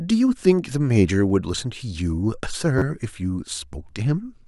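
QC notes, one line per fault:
1.29 s and 2.78–2.82 s, repeated buffer: audio arrived late, so the same piece of about 10.7 ms, which fits a 512-sample buffer, replays once, then three extra times. With a buffer this small, each sounds like a click or brief buzz. On the waveform, identical blocks sit side by side with hard joins. The spectrogram shows vertical lines at each join.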